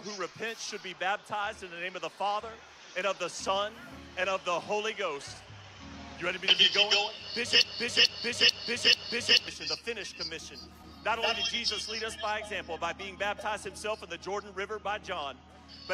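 From 7.62 s to 9.48 s the audio falls into a broken-record loop: a fragment about 0.44 s long plays four times back to back, each repeat identical, before normal playback resumes. Whatever should have sounded during those seconds is simply missing. The likely cause is a player, encoder or stream stalling and resending its last held fragment. Unlike an echo, nothing decays or overlaps, and unlike a brief stutter, the loop keeps repeating for nearly two seconds.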